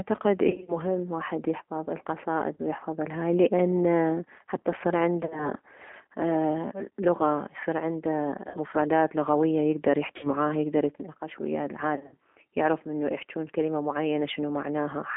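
A speech recording carried over a G.729 codec: the line is band-limited to roughly 250 Hz to 3.6 kHz, and the 8 kbit/s analysis-synthesis coding, which rebuilds the voice from a vocal tract filter, a pitch predictor and a few pulses per sub-frame, leaves a plainly audible rough, synthetic edge throughout. The clip also has six bursts of VoIP packet loss concealed by the speech codec. The decoder fills each gap by extrapolating its last pitch and filter state at falling gain, giving a smeared buzzy tone or coloured noise that fades and weakens the following syllables. The bursts fall at 0.50–0.79 s (about 140 ms missing, scattered over 180 ms), at 2.56–2.62 s (30 ms, just before "ويحفظ الهاي لان حتى"), at 5.23–5.49 s (60 ms over 80 ms), at 8.49–8.59 s (50 ms, between "اه لغة يصير عنده" and "لغوية يكدر"), at 10.17–10.32 s (60 ms, just before "يكدر يتناقش ويه"), and at 11.96–12.16 s (130 ms over 160 ms, with a longest run of 60 ms).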